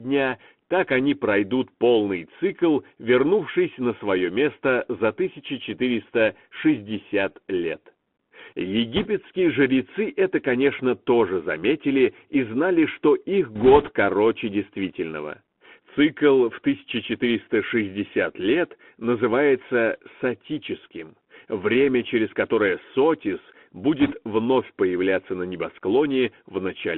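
Throughout the speech, the sound is thin and boxed in, with nothing above about 3.4 kHz, a grainy hiss underneath, and scratchy s sounds. This is the Bluetooth CVSD headset codec, whose one-bit delta coding fits a 64 kbps link and cannot keep pace with loud high-frequency energy.

A short burst of rushing crackle, with no sharp clicks, runs from 8.96 to 9.08 s just before "жрецы это конечно тоже". It returns from 13.56 to 13.91 s between "и знали что их" and "короче действительного", and again from 24.00 to 24.13 s before "вновь появляться на". These are bit errors on a Bluetooth voice link, at a rate of a few percent. Each flipped bit nudges the waveform only slightly and the error fades away, so the damage sounds like noise rather than pops.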